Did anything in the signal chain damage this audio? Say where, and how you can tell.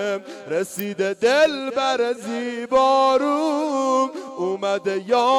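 Yes, a sharp snap at 0.79 s, lasting only about 3 ms, sits on top of the sound without interrupting it. That points to an electrical switching spike picked up in the analogue wiring, most likely a nearby switch, relay or static discharge arcing into the line. What separates it from a buffer or dropout click at the converter or driver stage is that nothing is missing: the underlying audio continues straight through the transient, with no gap or discontinuity.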